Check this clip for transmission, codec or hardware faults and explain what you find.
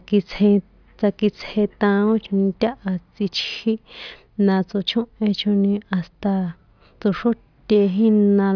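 Checking the clip turns up no faults to explain.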